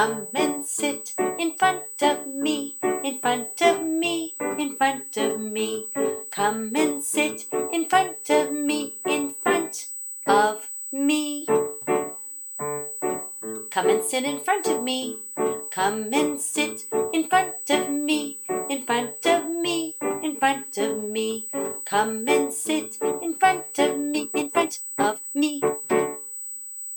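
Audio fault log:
Throughout: USB whine, a steady fixed-pitch tone at 8 kHz sitting around 10 dB below the signal. It matches the 125-microsecond microframe rate of a USB bus, whose current draw leaks into the audio through shared power or ground.
24.11 to 25.81 s: time-stretched section. The pace suddenly jumps to about 1.84 times normal speed while pitch stays put, leaving the passage rushed. This is likely software squeezing the audio to fit a length, dropping short pieces to hold the pitch.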